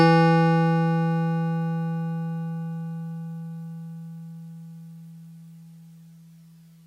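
No technical faults can be heard in this music.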